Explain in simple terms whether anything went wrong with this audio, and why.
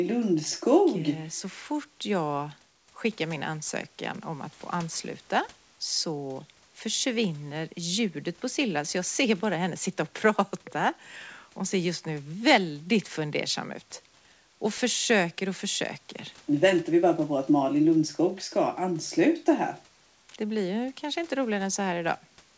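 Nothing went wrong with this speech recording. It came through a normal call connection, which leaves out sound above about 8 kHz so it is a little less crisp than a studio recording, and a faint room background sits well below the speech.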